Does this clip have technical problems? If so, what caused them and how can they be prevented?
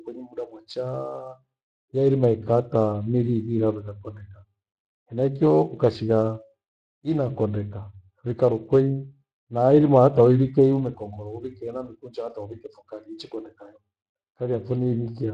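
Yes. Speex codec damage runs through the whole speech clip, from start to finish. Speex is a CELP coder that models the voice as a filter driven by an excitation signal. The degree of coarseness fits a bitrate of about 22 kbps, where too few bits describe that excitation. The result is a plainly audible hoarse, noisy grain on the voice, and the upper frequencies sound like a shaped hiss rather than real detail. To prevent it, record or transmit with a modern codec such as Opus at a higher bitrate.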